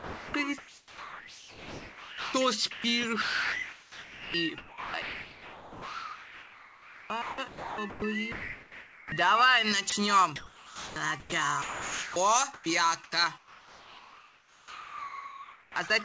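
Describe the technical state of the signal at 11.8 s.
At 11.8 s you're in the middle of a choppy stretch running from 9.90 s to the end of the clip. Bits of the sound drop out and are replaced by comfort noise, about 3.9 s replaced in all. That's likely sound chopped by the voice detector on the sending side, heard through the G.722 call path with nothing above 8 kHz.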